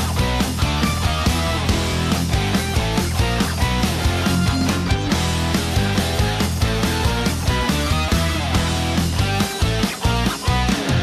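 No dropouts, clicks, distortion, level jumps or other technical faults can be heard anywhere in the recording, and the signal holds steady throughout.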